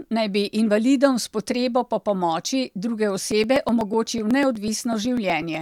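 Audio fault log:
3.32–5.55 s, periodic USB or driver dropouts: a recurring stall on the USB bus or in the audio driver drops roughly a millisecond of speech every 0.12 s. The skipped samples leave about twenty small, evenly spaced ticks, audible only where speech is present.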